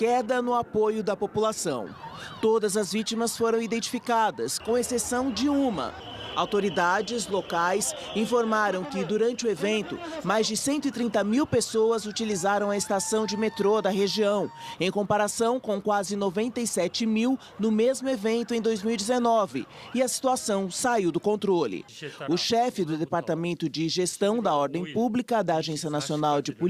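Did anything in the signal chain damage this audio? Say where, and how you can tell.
No, nothing stood out on listening that would point to damage at any stage of the chain.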